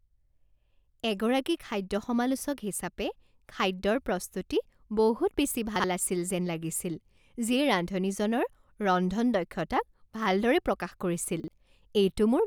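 Chunks out of order at 5.76 to 5.84 s and again at 11.40 to 11.48 s: in each case a 40 ms block of the speech arrived late and was played one block behind where it belonged. The two blocks in each 80 ms span swap places. No audio goes missing, but each swap creates three abrupt joins. The result is a brief jumbled stutter.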